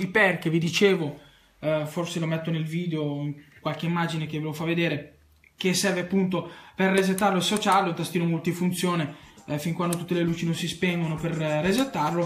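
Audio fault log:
Nothing here to log, since no faults turn up anywhere in this clip.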